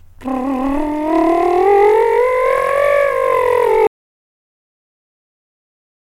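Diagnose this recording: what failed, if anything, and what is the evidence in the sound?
The music plays normally up to 3.87 s and then drops straight to silence, staying there until the end at 6.16 s. It's an audio dropout to silence: no fade and no room tone in the gap. The input was most likely lost at the capture end, through a loose connection, a dropped device link or a mute, while the recorder kept writing empty samples. Whatever was playing after that point is gone.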